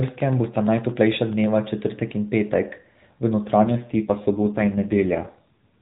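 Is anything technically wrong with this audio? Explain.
Yes. From 3.62 s to 5.76 s the speech turns rougher, buzzier and more synthetic, with the 4 kHz narrowband ceiling unchanged and no gap. That is an AMR rate drop: the mobile codec falls back to fewer bits for the voice, which fits a change from 12.2 to 5.9 kbps.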